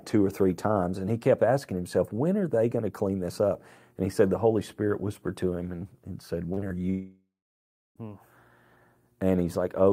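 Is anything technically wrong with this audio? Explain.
Yes. There are two kinds of fault, close together in the second half of this speech clip.

Three short concealed packet losses come in quick succession, at 6.53 to 6.59 s, 6.61 to 6.64 s and 6.68 to 6.72 s. Each is a brief smear or wobble, as if the sound briefly sticks and then catches up. A consonant in that stretch can vanish. About 40 ms, then 20 ms, then 20 ms of audio arrived too late to decode. The receiver bridged each hole by extending the preceding sound before blending back into the real signal.

A long network dropout follows from 6.90 to 7.97 s. The last sound trails on as a fading buzz or hiss, then goes silent for roughly the final two-thirds of a second before the audio resumes, with that stretch simply missing. This is likely a network interruption: about a second of audio never arrived, and the receiver kept extending the last sound until it faded out.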